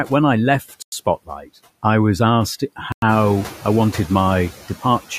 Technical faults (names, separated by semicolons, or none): noise suppressor artifacts; gap between chunks; speech cut by the noise suppressor